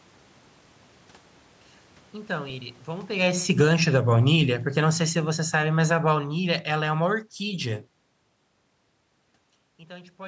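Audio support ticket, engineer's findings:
Level sags steadily 3.41–7.91 s, voice and room noise sinking together, about 13 dB down by the end. Automatic gain falling: AGC judged input too loud or its background noise too strong and ramped gain down. Separate from talker-movement level shifts near 3 s and 9 s.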